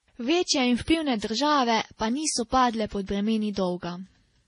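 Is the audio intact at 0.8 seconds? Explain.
No. At 0.8 s, as throughout the clip, the speech carries stacked artefacts from more than one lossy codec, likely transcoding between lossy codecs, consistent with a low-rate MP3 re-encoded to Vorbis. Each pass adds its own artefacts, and nothing remains above 10.5 kHz.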